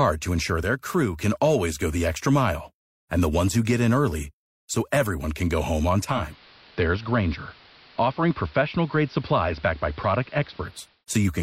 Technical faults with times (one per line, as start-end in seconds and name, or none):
6.02-11.05 digital radio blending to analogue